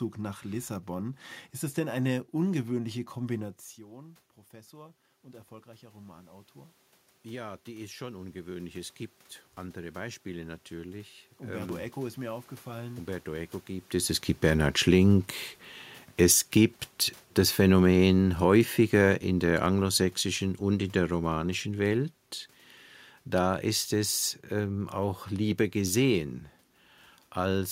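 Automatic gain rising, from 3.37 s to 13.96 s, just after "es denn eine ungewöhnliche": the voice dropped about 18 dB as the talker moved back, and the control slowly added about 15 dB, so speech and room noise swell together.

Automatic gain falling, from 14.31 s to 22.07 s, just after "es es": the talker moved again, and the control gradually cut about 9 dB, so speech and background sink together.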